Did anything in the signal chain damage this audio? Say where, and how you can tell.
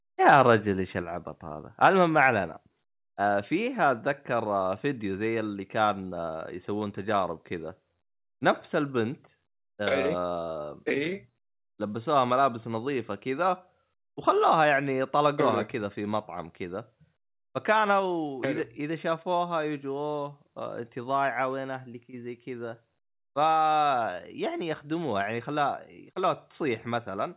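Yes. The microphone volume stepped down three times, at 1.02 s, 15.3 s and 18.0 s, by about 3 dB, then about 2 dB, then about 2 dB. Each is an instant, lasting drop in level of the whole signal, with no recovery afterwards. On a waveform the envelope shrinks abruptly at each point and stays smaller. On a spectrogram the full band, which ends at 4 kHz as expected on the G.711 call path, dims uniformly. The likely cause is call-processing gain control reducing the device input volume.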